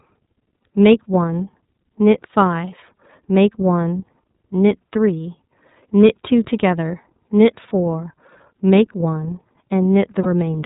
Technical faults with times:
0.00-10.66 iLBC codec
10.23-10.26 lost iLBC frames

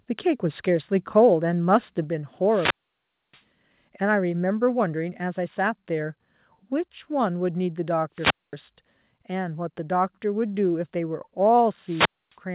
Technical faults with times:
2.04 microphone volume stepped down
2.44-3.45 wireless microphone squelch dropout
4.32 microphone volume stepped down
8.13-8.58 wireless microphone squelch dropout
11.81-12.38 wireless microphone squelch dropout

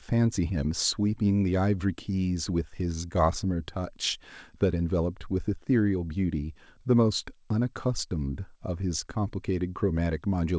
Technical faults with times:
none

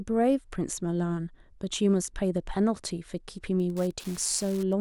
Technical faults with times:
3.56-4.81 Wi-Fi interference

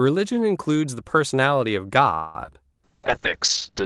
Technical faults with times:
2.14-2.35 call audio freeze
2.44-2.49 short concealed packet loss
2.84-3.85 call bitrate drop

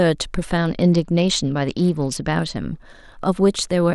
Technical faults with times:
0.57-2.57 Bluetooth SBC bit pool drop

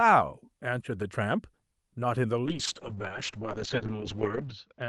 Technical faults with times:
2.46-4.89 call bitrate drop

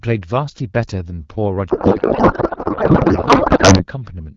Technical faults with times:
1.69-3.87 codec payload misread

